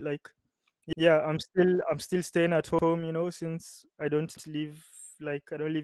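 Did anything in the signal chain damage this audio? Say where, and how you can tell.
Yes, two things. First, a repeated buffer at the driver or buffer stage. At 0.93 s, at 2.79 s after "staying at", and at 4.37 s after "know since I don't", about 93 ms plays twice with a hard join, which fits a late 4096-sample buffer.

Second, a lost packet rebuilt from error correction, out on the network. From 3.00 to 3.06 s, just before "you know since I", 40 ms turns rough and noisy with no gap. That points to two lost packets, which Opus rebuilt from the low-bitrate copies in the following packets.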